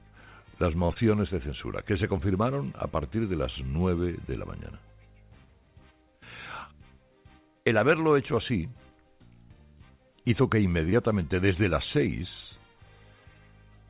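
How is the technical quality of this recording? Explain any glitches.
Three short glitches come through, all packet timing trouble on a call link. The audio stops dead at 4 kHz, which fits a narrowband G.711 A-law path at 64 kbps.

At 0.86 s there's a short stall from a late packet, lasting until about 0.92 s. The next chunk hadn't arrived, so the jitter buffer ran dry and the receiver stretched the last bit of sound for about 35 ms, then picked up exactly where it left off. Nothing is lost, but that moment hangs a beat too long with a faint buzzy hold, and everything after it runs about 35 ms later.

Right after, at 0.94 s, and again at 10.90 s, you get short concealed packet loss. In each case about 20 ms of audio never made it to the decoder. The receiver papered over the gap by carrying the previous sound forward for roughly 20 ms before blending back into the real signal. Each one is a quick smear or wobble.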